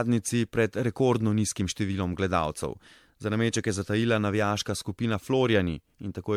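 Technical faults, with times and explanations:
Throughout, generation loss: the speech has a swirly, watery quality with a hollow, scooped-out feel, and consonant attacks come across soft and smeared rather than crisp. The content stops at about 19.9 kHz. That is more damage than a single MP3 pass at the rate this suggests, around 96 kbit/s, would leave. It's likely the result of repeated decode-and-re-encode cycles, perhaps seven or so, each re-quantising on a shifted frame grid so noise and spectral holes pile up.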